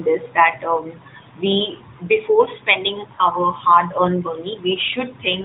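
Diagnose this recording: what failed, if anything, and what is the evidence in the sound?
The failure sits on the network side: lost AMR speech frames. There's a brief dip or warble at 0.52 to 0.56 s, just before "um we before", and another at 3.16 to 3.23 s. Each sounds like a single 20 ms frame dropped, with the AMR-NB decoder smearing over it by reusing the last good settings at lowered gain.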